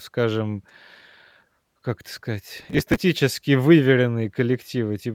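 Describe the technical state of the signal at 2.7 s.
A gritty crackle tears across the speech from 2.58 to 3.01 s, just after "как это": processor overload crackle, with dozens of few-millisecond buffers missed and skipped, leaving hard-edged gaps.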